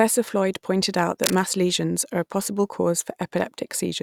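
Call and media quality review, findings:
Scratchy, rustling burst over the speech, 1.24–1.46 s, between "pointed out" and "lesions are a possible". Dense and uneven, roughly 5 dB under the speech. Cable scratch noise: likely a worn cable or connector being moved, its contact resistance fluctuating rapidly.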